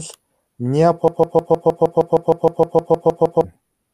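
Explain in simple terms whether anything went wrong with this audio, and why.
Something did go wrong: from about 1.08 s to 3.44 s the speech gets stuck in a broken-record loop. A snippet of roughly 0.16 s plays fifteen times back to back. The player or stream likely stalled and kept repeating its last piece, so the real audio there is lost.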